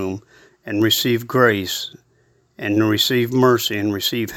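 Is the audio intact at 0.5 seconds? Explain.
Yes, the speech at 0.5 seconds plays through cleanly, with no dropout, click, distortion or other fault at that moment.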